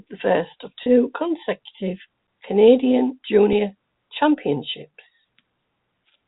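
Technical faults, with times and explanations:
0.83 to 0.86 s and 3.53 s, packet loss with pitch repetition: Just after "the first of", about 30 ms of audio drops out, which fits three lost 10 ms packets. The receiver fills the gap by repeating the last pitch period, so the sound briefly holds on one buzzy, steady tone. At 3.53 s a single 10 ms gap gets the same treatment, heard as a tiny, slightly frozen catch. Both are too short to fade to silence. The narrow 4 kHz telephone band of the G.711 line is audible throughout.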